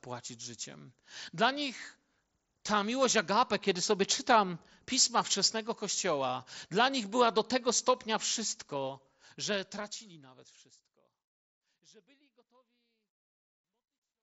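No technical faults can be heard in this speech. The level fades out smoothly from around 9 s to 14.2 s, and the audio has the wideband sound of a Bluetooth mSBC headset link, stopping at 8 kHz with a faint grain on louder sounds.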